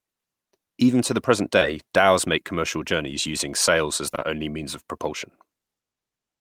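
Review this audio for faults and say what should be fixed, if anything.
There's short concealed packet loss in two spots. At 1.59 to 1.63 s, between "to the present" and "dhows make commercial journeys", about 20 ms of audio never arrived and the receiver patched it by extending the preceding sound before blending back in, leaving a brief smear. At 4.11 to 4.23 s, between "journeys using sails as" and "only means of propulsion", three of those patches run back to back, so the wobble is longer. To prevent it, give the jitter buffer more headroom and stabilise the network path so packets arrive in time.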